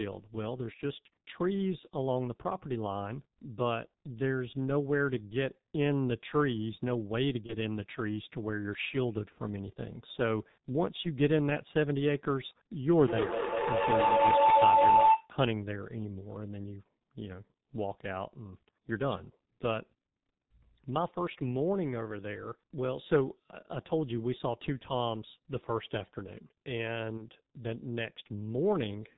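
The whole recording has passed through the G.723.1 codec at 6.3 kbit/s, and the damage is heavy. The codec discards everything above 4 kHz and re-estimates its speech model only once per 30 ms frame. As a result, the speech sounds muffled and hoarse throughout, and consonants are smeared rather than crisp. The call's microphone processing only trims the lowest bass, which is normal, so the codec's 4 kHz ceiling is what can be heard.

From 7.46 to 7.55 s there is VoIP packet loss concealed by the speech codec. The gap matches the loss of a single 30 ms frame. The decoder fills it by extending its last pitch and spectral envelope at a falling gain. This produces a short, stretched patch of sound that fades. Because each frame's state feeds the next, the audio stays weak or distorted for a short time after real packets resume.

Between 12.94 and 15.34 s a feedback howl builds up. Sound from a loudspeaker is picked up again by a microphone on the same call, and each pass round the loop adds gain. 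The repeats therefore grow instead of dying away, and they narrow to a tone of roughly 1 kHz. The repeats come around 200 ms apart, which points to the loop's delay. At its loudest it is about 9 dB above the speech.

A second concealed packet loss occurs at 27.17 to 27.22 s. It is again consistent with one lost 30 ms frame, and it has the same brief extrapolation and weakened recovery.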